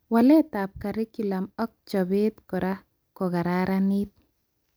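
Nothing stood out as a technical fault on listening to the speech in this recording.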